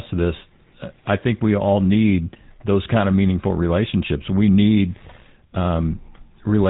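From start to finish the speech carries the sound of the GSM full-rate codec, and the damage is plainly audible. The codec rebuilds the voice from a vocal-tract model excited by evenly spaced pulses, so it comes out buzzy and gravelly. Nothing gets through above about 3.8 kHz, which dulls the top end. The roughness suggests the old 13 kbps GSM rate.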